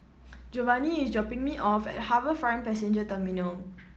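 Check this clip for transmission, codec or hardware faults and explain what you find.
One transmission fault: a lost packet rebuilt from error correction, from 0.95 s to 1.09 s. Four separate packets went missing, about 80 ms of audio in all. Each following packet carried a low-bitrate backup copy of the one before, and the decoder played those copies, so there is no dropout. Those copies hold less detail than the normal stream, so this stretch of speech turns briefly rougher and grainier before the full-quality stream returns. The surrounding Opus call path caps the audio at about 8 kHz, running at 32 kbps.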